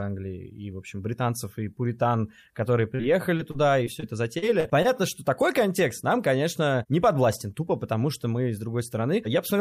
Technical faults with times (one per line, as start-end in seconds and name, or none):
2.95-3.01 short concealed packet loss
3.37-4.86 repeated packet loss (robotic sound)